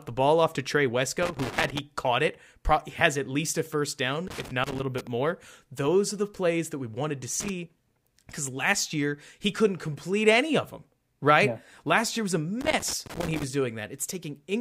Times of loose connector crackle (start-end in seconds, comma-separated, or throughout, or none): 1.23-1.79, 4.27-5.07, 7.40-7.49, 12.61-13.43